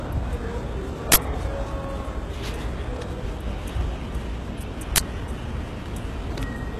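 Throughout, the treble has a gritty, plainly audible coded quality, with nothing above 14.8 kHz. This is likely HE-AAC compression at a low rate, around 16 kbps. The upper band is rebuilt by copying lower bands upward, so its harmonics don't align with those below the crossover. A spectrogram shows a hard ceiling at 14.8 kHz and smeared, repeated-looking patches above the crossover.

At 1.12 to 1.16 s and again at 4.96 to 5.00 s, a 40 ms block of unrelated samples cuts in. This is an uninitialised buffer: leftover memory was played before audio was written to it. On the waveform each appears as a rectangular slab with abrupt edges, and on the spectrogram as a broadband column.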